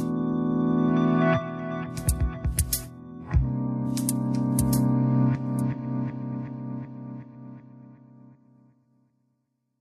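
No technical fault can be heard anywhere in the audio, with the signal continuous and intact across its whole duration.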